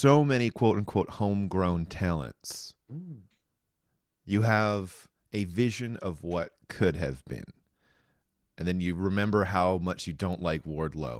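No technical faults are audible.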